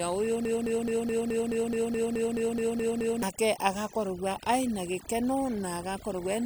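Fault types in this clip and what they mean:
Overdone noise removal: throughout, the background drops and breaks up into twinkling specks, because over-aggressive noise reduction gates quiet frequency bands.
Broken-record loop: from 0.45 to 3.23 s, a 213 ms fragment repeats back to back 13 times, likely from a stalled player or stream resending its last buffer.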